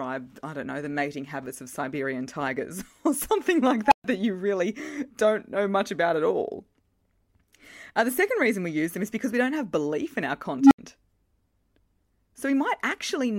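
A squeal around 1 kHz swells over 56.5 ms at 3.86 s, after "or something like", then drops into 128 ms of silence before "that you really don't". At 10.56 s, after "have belief in our", a lower tone near 300 Hz climbs over 146 ms, clips, and gives way to 75 ms of silence. Both are an unstable filter: a recursive filter with bad coefficients whose output grows until the numbers overflow and the sound cuts out until the filter resets.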